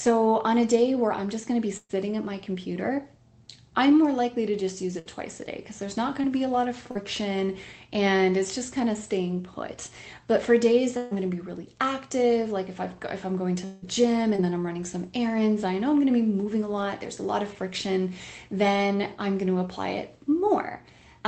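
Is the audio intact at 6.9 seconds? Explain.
No, there's a short concealed packet loss from 6.91 to 6.97 s: about 40 ms never arrived, so the receiver patched it by extending the preceding sound, leaving a brief smear.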